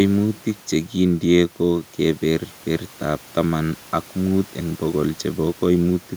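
No technical faults can be heard anywhere in the recording. The speech runs its full course with nothing in the signal that calls for comment.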